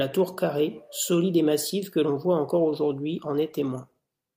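At 2.54 s there's a call bitrate drop that runs to the end. The encoder falls from 64 to 28 kbps as the bandwidth estimate sinks, so the speech gets coded more coarsely and turns rougher and watery, bottoming out for about 1.2 s.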